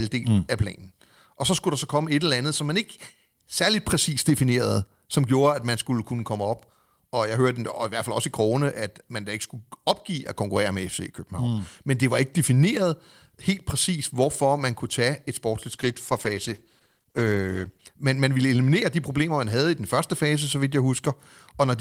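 From 15.7 to 17.91 s, a call bitrate drop pushes the encoder from 32 to 13 kbps for about 2.1 s. The speech turns rough and muffled as coarser coding loses the highs. The degradation is continuous, not the brief gaps of packet loss.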